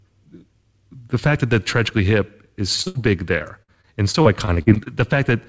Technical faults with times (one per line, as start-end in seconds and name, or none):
2.82-2.88 short concealed packet loss
2.88-2.97 burst of packet loss
3.39-4.88 repeated packet loss (robotic sound)